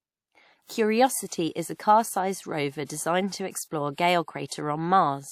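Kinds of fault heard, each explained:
Low-bitrate audio saved at a high bitrate: the speech likely passed through a low-bitrate codec, perhaps WMA near 64 kbit/s, before being re-encoded as high-bitrate MP3, which cannot restore what was removed. Nothing sounds above 17.1 kHz, and the first encoding's artefacts remain throughout.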